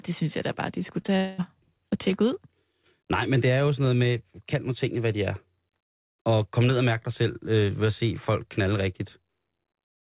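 Speech, band-limited to 4 kHz, consistent with a G.711 call path. Short concealed packet loss at 1.02–1.06 s and 1.06–1.10 s leaves brief smears where the waveform turns repetitive and spectrogram detail blurs. From 1.16 to 1.40 s a fading buzz or hiss stands in for the sound, likely a long network dropout, showing as a flat, decaying stretch.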